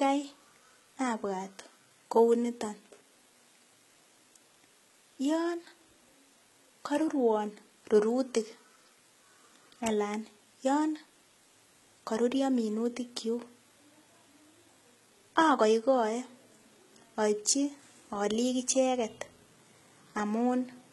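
From start to finish, the speech carries heavy coding damage, likely from HE-AAC compression at a very low rate, which fits roughly 16 kbps. Nothing survives above 11.8 kHz. Below a crossover the core codec carries the spectrum, while the treble is rebuilt by copying lower bands upward and shaping them with a coarse envelope. That synthetic top end does not match the real harmonics, so s sounds turn gritty, metallic or lispy.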